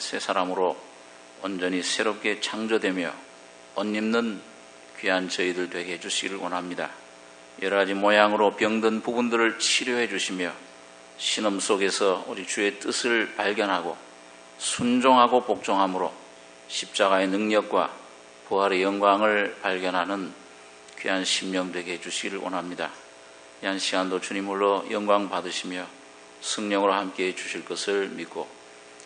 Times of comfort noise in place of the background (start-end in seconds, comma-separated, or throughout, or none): none